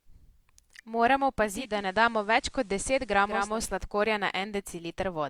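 From 1.38 s to 3.64 s the receiver loses its digital stream and cross-fades over about 0.47 s to the station's FM broadcast, a case of digital radio blending to analogue. Faint hiss sits well beneath the speech, at an unchanged level.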